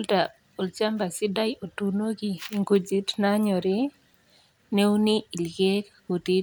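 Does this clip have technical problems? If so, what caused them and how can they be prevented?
No, nothing here stands out as a technical problem, so there's nothing that needs preventing.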